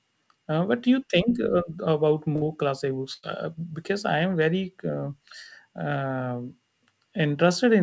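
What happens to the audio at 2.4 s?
From 2.36 to 2.44 s there's a burst of packet loss. A run of packets never made it, so the receiver stretched the last bit of speech for about 55 ms as a fading smear, then jumped ahead with 60 ms of speech gone.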